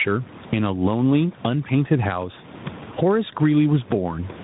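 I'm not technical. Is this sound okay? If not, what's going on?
No, not quite. Two problems run through the whole speech clip.

The first is gain pumping. The level is pulled down each time the speech gets loud. Loud and quiet moments end up too close in level, so the speech sounds squashed. The likely cause is a microphone level set far too high, with an automatic limiter pulling it back down on every loud sound. The room's own background noise is normal.

The second is tandem speech coding. The call seems to have passed through two different phone speech coders in a row. Each one decoded the sound and squeezed it again, working on an already damaged copy. The result is rougher and more muffled than a single phone link would give. Everything above about 3.8 kHz is missing, which takes away the crisp edges of sounds like s and f.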